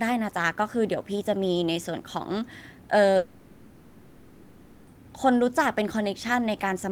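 From 3.17 to 4.89 s the speech stops and the last sound smears into a fading buzz or hiss for about 1.7 s, then talking resumes with that stretch missing. This is likely a long network dropout, with the receiver filling the gap.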